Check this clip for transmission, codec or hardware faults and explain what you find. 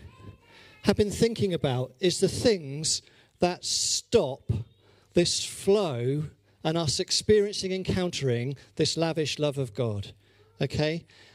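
No transmission, codec or hardware faults.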